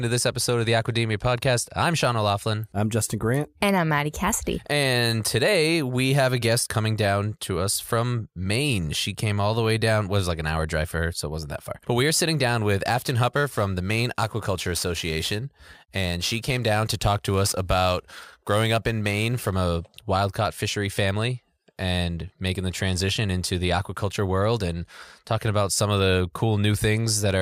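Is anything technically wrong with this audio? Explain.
Yes. From 12.87 to 19.56 s, between "are sitting down with" and "a wild caught fishery", there is crude rate conversion. It sounds like it went from 44.1 kHz to 48 kHz by repeating the nearest sample, with no filtering. The result is a gritty, inharmonic fizz about 20 dB below the speech. Unlike steady hiss, this fizz rises and falls with the loud and high-pitched parts.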